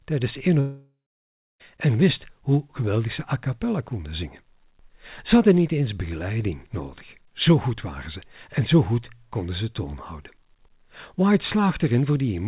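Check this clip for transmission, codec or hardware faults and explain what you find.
One transmission fault is audible in this speech, which arrives over a narrowband call path with nothing above 4 kHz, consistent with G.711 A-law at 64 kbps. From 0.60 to 1.61 s there is a long network dropout. About a second of audio never arrived, likely because packets were lost in transit. The receiver stretches the last sound into a buzz or hiss that fades, and then roughly 650 ms of near-silence follows. Speech resumes with that second missing. A brief packet-loss glitch lasts a few tens of milliseconds and its concealment bridges the gap. Here the concealment runs out, and the lost stretch is never recovered, only faded over and then left silent.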